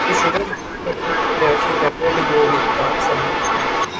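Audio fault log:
0.00–0.43 s, echo leak: a far-end echo canceller likely let its loudspeaker pickup pass back into the call, so a copy of the speech returns about 396 ms late at roughly the same level as the original, doubling and smearing it.
0.40–0.88 s, speech suppressed in double talk: with both sides talking at once, the echo canceller likely could not tell the talker from the echo and turned everything down, so the speech dips by up to about 25 dB for roughly 0.4 s.
0.87–3.99 s, echo leak: the same echo path returns for the rest of the clip, again arriving about 396 ms behind the speech and at roughly equal level, giving a persistent delayed double that blurs the speech.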